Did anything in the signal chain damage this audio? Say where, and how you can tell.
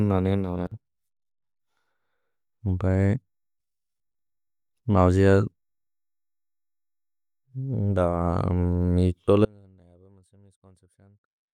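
Yes. At 9.45 s the speech drops out abruptly and never returns. From there to the end only a faint trace remains, roughly 30 dB below the normal level. That's an audio dropout to a faint residue, not a pause or a fade. The cut is too sudden and the path behind it stays live. The most likely culprit is the analogue wiring, with a failing connection losing the main feed while a little signal still leaks across.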